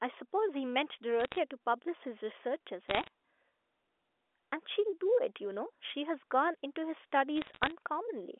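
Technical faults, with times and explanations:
1.20 to 1.38 s: bit errors on a digital phone line. Sharp ticks break through the sound. Flipped bits on the G.711 A-law link corrupt single samples, at a rate of about half a percent.
2.88 to 3.08 s: bit errors on a digital phone line. A denser crackle appears. Errors on the sign or high bits throw single samples far off, and each one clicks.
7.37 to 7.72 s: bit errors on a digital phone line. The longest run of crackle sits over the band-limited 0.3 to 3.5 kHz speech, which stays intact beneath it.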